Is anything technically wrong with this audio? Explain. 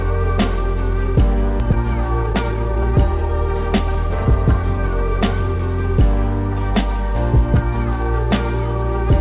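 Yes, there are two kinds of fault.

Skip ahead at 1.6 s: the receiver dropped a block of audio while later audio was already queued, so playback jumps forward with no fill in between. Roughly a second of material is gone, and the two sides of the gap are spliced almost directly, which also cuts the playback delay by about that much. You hear an abrupt discontinuity where the sound leaps ahead mid-flow.

Jitter buffer speed-up from 1.64 to 3.05 s and again from 3.64 to 5.55 s: the buffer held more audio than its target, so it repeatedly removed short pitch-period-length pieces to catch up. The first stretch runs at 122% speed, shedding roughly a third of a second, and sounds noticeably hurried. The second runs at 105%, dropping about a tenth of a second, a milder rush. In both, the pitch stays unchanged. Throughout, the G.711 mu-law call codec limits the sound to below 4 kHz.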